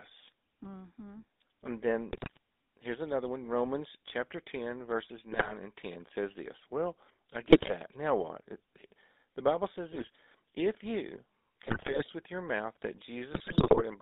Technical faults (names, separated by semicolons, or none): GSM full-rate codec; GSM bit errors